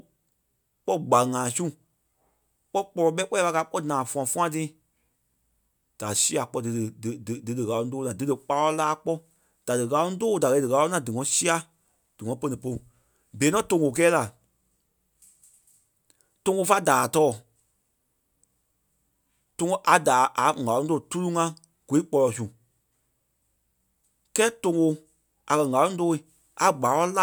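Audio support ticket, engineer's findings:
No audible faults found.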